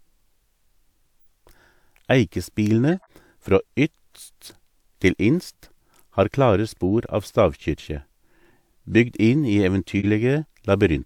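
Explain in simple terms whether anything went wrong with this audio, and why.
Two things go wrong in this speech recording. The first is compressed frames skipped, at 1.19 to 1.25 s and again at 2.90 to 3.12 s, just before "frå ytst til inst". Each time, roughly 40 ms of audio never gets played, because chunks of the compressed file were lost or the decoder rejected them as damaged. The sound jumps forward by that much where it rejoins.

The second is a corrupt frame decoded, from 9.99 to 10.06 s, right after "bygd inn i". Here a few frames got scrambled, but the decoder played them anyway. Because the data was garbled, it put sound energy at the wrong pitches for that short stretch. The result is a brief, fairly loud glitch that doesn't belong to the speech.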